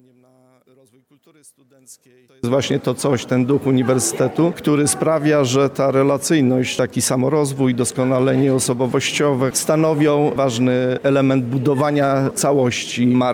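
From the start to 2.44 s the sound collapses to a faint remnant, about 34 dB below the level that follows. The likely cause is one channel inverted: with one stereo channel's polarity reversed, everything the two channels share cancels when they are summed to mono, leaving only their small difference. On a waveform this stretch is a near-flat line before full-height signal resumes at 2.44 s. A spectrogram shows it as a dim band.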